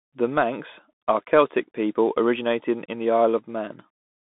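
Bluetooth CVSD headset codec damage runs throughout the speech. The signal is coded as one up-or-down bit per sample at 64 kbps with an adaptive step, and the band sits between 200 Hz and 3.6 kHz. Fast, loud high content outruns the step, s sounds turn scratchy, and granular hiss lies underneath.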